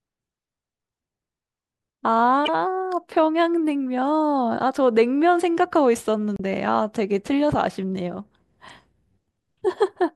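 Three short bursts of damaged data in a compressed stream interrupt the speech. The first runs from 2.45 to 2.49 s. The second runs from 6.36 to 6.40 s. The third is the shortest, from 8.68 to 8.70 s. Each lasts about 20 to 40 ms. At these points the encoded bytes are corrupt. The decoder misreads the frames, loses its place and hunts for the next valid header. Each one sounds like a brief chirp, squawk, click or short hole.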